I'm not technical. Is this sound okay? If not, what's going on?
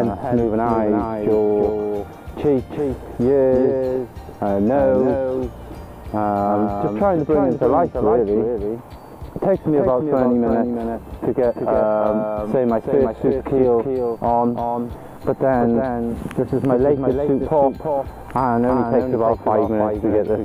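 No. The whole clip has a doubled audio track. A second copy of the sound trails about a third of a second behind, a little quieter. It sounds like a flat, sharp echo. It likely comes from the sound being recorded twice through a slower route.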